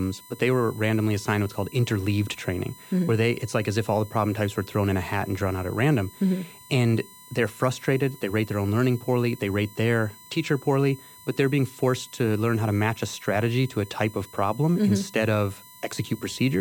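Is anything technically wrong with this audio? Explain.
Yes. USB whine runs through the whole speech clip, a steady fixed-pitch tone on a 1 kHz fundamental with its harmonic series, and its strongest component is up at 18 kHz. It comes from the USB bus drawing current in 1 ms frames, a pulse train that couples into the audio path through shared power or ground and lays the 1 kHz comb of harmonics under the speech. At roughly 25 dB below the signal, it is heard as a thin, high-pitched whine.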